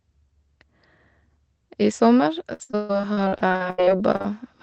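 From 2.53 s to 4.26 s, repeated packet loss gives a choppy, robotic sound: eighteen gaps, the longest 139 ms, are each filled by extending the preceding sound, concealing about 40% of the stretch. A spectrogram shows smeared, flat bands and lost onsets, and the waveform looks jagged and repetitive.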